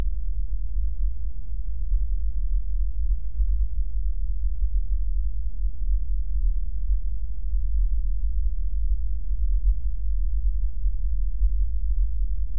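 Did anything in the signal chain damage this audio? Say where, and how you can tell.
No, nothing in the chain audibly damaged this audio.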